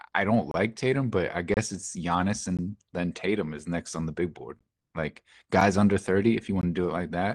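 Gaps between stream segments cut into the speech at 0.51–0.54 s, 1.54–1.57 s, 2.57, 3.59, 4.59, 5.61 and 6.61 s, one per 1-second segment. Mismatched segment timestamps leave holes of 4 to 28 ms that are filled with silence. Each is a hard-edged dropout, with no audio lost.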